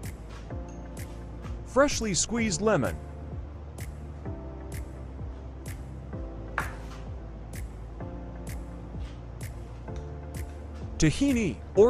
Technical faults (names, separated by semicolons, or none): none